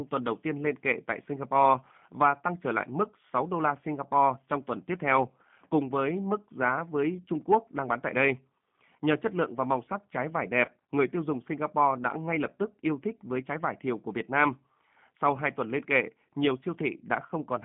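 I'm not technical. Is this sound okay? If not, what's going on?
No. The whole recording has passed through the G.729 codec, a phone-call compression method that rebuilds speech from a simplified model of the voice. That gives it a thin, slightly rough, synthetic sound, with only a narrow range of frequencies kept. Unlike a simple bad microphone, the graininess comes from the rebuilding itself.

Around 10.65 to 10.71 s there is VoIP packet loss concealed by the speech codec. About 30 ms of the call never arrived, and the decoder filled the gap by stretching the last bit of sound into a brief smear that fades.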